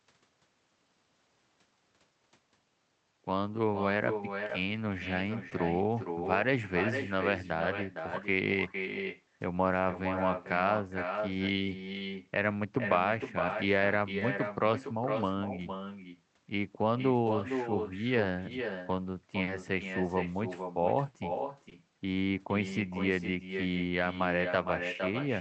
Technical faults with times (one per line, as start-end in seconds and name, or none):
0.00-25.41 echo with no canceller
4.47-4.51 short concealed packet loss
5.49-5.53 short concealed packet loss
11.55-11.59 short concealed packet loss
14.19-14.23 short concealed packet loss
19.43-19.49 short concealed packet loss
21.69-21.73 short concealed packet loss